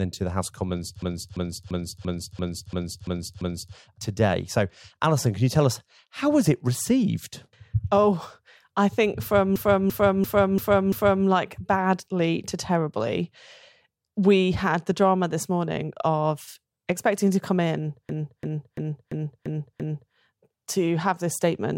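System hang loop at 1.02 to 3.76 s (after "the house of commons", before "today so alison can"), 9.56 to 11.26 s (after "oh i think from", before "like badly to terribly") and 18.09 to 20.14 s (after "expecting to come in", before "to have this statement") in this speech recording: while the system froze, the sound hardware kept replaying one 341 ms stretch, which fits a 16384-sample buffer. It repeats 8, 5 and 6 times at 2.93 Hz, like a skipping record, and the speech then resumes with essentially nothing missing.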